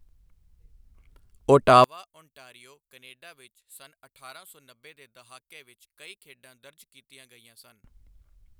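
Speech that, from 1.84 s to 7.84 s, likely has one channel inverted: one stereo channel's polarity is flipped, so the matching content cancels when both sides sum to mono. The centred speech drops by about 30 dB, leaving only a faint trace until it returns.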